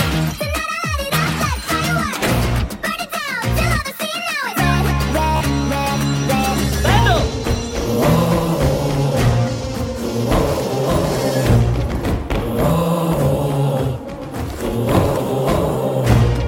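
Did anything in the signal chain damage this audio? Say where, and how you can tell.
Yes. At 5.36 to 5.41 s a short slice repeats as a brief buzzing stutter, then the sound resumes further on, skipping about 44 ms. This is Bluetooth stutter on the wireless link: late or lost packets, fitting a few, made the receiver replay its last buffer.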